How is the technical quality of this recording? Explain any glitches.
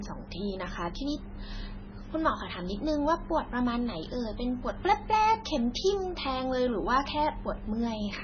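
Quality is poor, with heavy compression damage throughout the speech. The whole clip shows MP3 compression, likely at a very low bitrate near 16 kbps. Nothing sounds above 6.5 kHz. Starved of bits, the encoder drops weak frequency lines that flicker between frames. Speech turns watery and swirly, with smeared attacks.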